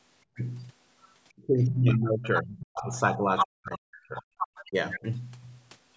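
Speech recorded on a call, with background gated by the echo canceller from 0.25 to 0.36 s: the room sound dips by about 20 dB for roughly a tenth of a second, as the canceller turns the microphone down hard while its loudspeaker plays, then releases it. The other side's voice leaks through at 0.36 to 0.44 s, 1.6 to 1.64 s, 2.36 to 2.42 s, 3.37 to 3.46 s and 4.16 to 5.04 s. These are brief scraps and one longer stretch that range from barely audible up to as loud as the talker, most likely loudspeaker echo the canceller failed to remove from the microphone. Speech is suppressed in double talk from 1.47 to 4.24 s, with the talker's voice cut by up to about 40 dB across roughly two seconds, and again from 4.69 to 5.04 s, dipping about 20 dB. The likely cause is both sides speaking at once, which left the canceller unable to separate talker from echo, so it turned both down.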